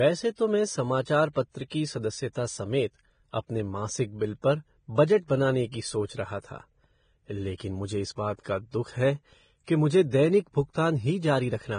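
Speech throughout, hissy and grainy with nothing above 9.7 kHz; the treble sounds replaced by noise rather than simply cut, which points to heavy Vorbis compression, likely at a low bitrate.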